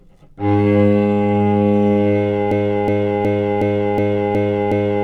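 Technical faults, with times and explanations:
2.52 s to end: broken-record loop. A 0.37 s fragment repeats exactly, back to back, seven times until the clip stops. The stream likely stalled and kept resending the last piece it held. The sound that should have followed is lost.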